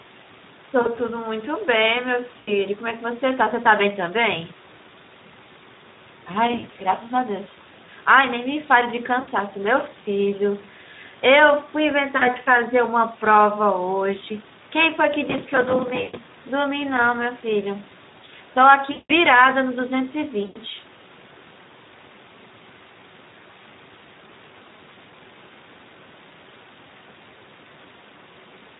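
The whole recording passes through the Speex codec at a low quality setting, which fits a rate around 11 kbps. With so few bits left for the excitation signal, the speech comes out plainly hoarse and grainy. The upper band carries a noise-like fill rather than real detail. The lowest bass is trimmed by the call's microphone processing, which is normal.

VoIP packet loss concealed by the speech codec occurs at 0.81–0.95 s, 2.39–2.51 s, 6.51–6.80 s, 9.19–9.32 s, 12.17–12.29 s, 16.01–16.16 s, 18.91–19.13 s and 20.43–20.59 s. Each gap covers 40 to 180 ms of missing audio. Around 6.5 s the losses are scattered over 240 ms in short runs. The decoder fills each hole by repeating its last pitch and filter at falling gain, so the speech smears into a buzzy, fading tone and stays weak briefly after the packets return.

Processor overload crackle appears from 15.26 to 16.32 s and again from 20.75 to 21.10 s. 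The processor falls behind on dozens of buffers, which fits buffers of roughly 5 ms. Each late buffer is covered by replaying a scrap of old audio with hard edges. Together these produce a gritty, tearing crackle over the speech that stops once the load eases. The first burst overlaps the dropout at 16.0 s, and the second follows closely after the one at 20.4 s.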